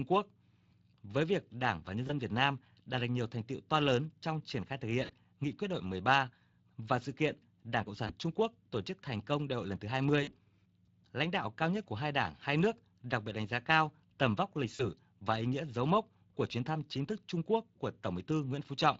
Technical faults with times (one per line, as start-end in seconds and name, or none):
0.00-18.99 Speex codec
2.07-2.11 VoIP packet loss concealed by the speech codec
5.05-5.12 VoIP packet loss concealed by the speech codec
8.07-8.12 VoIP packet loss concealed by the speech codec
10.23-10.31 VoIP packet loss concealed by the speech codec
14.75-14.84 VoIP packet loss concealed by the speech codec